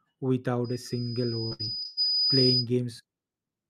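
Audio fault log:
0.64–2.67 s, loudspeaker feedback squeal: the microphone is picking up its own loudspeaker, and at 5 kHz the loop gain passes one, so that tone feeds itself. It swells over roughly a second and a half into a piercing whistle sitting around 5 dB above the speech.
1.47–1.99 s, repeated packet loss (robotic sound): audio data kept going missing, with five gaps, the longest 113 ms. Each hole is filled by stretching the preceding sound, covering about half this span, so the speech turns choppy, with pieces dropped out.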